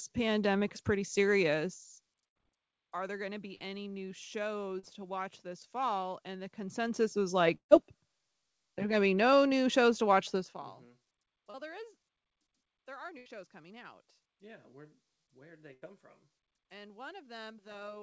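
At 2.28 s the speech breaks into a held buzz or fading hiss lasting about 75 ms before it picks up again slightly further on. This is a burst of packet loss: about 80 ms of the call, several packets in a row, failed to arrive in time. The receiver stretched the last sound it had and faded it, and the lost stretch was never recovered. The same thing happens at 13.18 s and at 15.74 s, just after "where where'd they". Each time roughly 80 ms is missing.

At 3.55 s there is a brief smear with a wobble, about 38 ms long. At 4.79 s, just before "to watch this fall", and at 11.50 s, just before "there is", the same kind of blur lasts about 36 ms and 32 ms. These are short concealed packet loss events. Each time about 40 ms of audio missed the decoder. The receiver patched the hole by continuing the previous pitch or noise, then blended back into the real signal, so a short consonant can be swallowed.

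At 7.55 s the sound trails off into a fading buzz or hiss and then drops to near silence before returning at 7.73 s. This is a long network dropout. The likely cause is that about 160 ms of audio never arrived, so the concealment faded out and left a gap of roughly 100 ms. Throughout, the call codec's band limit leaves nothing above 8 kHz.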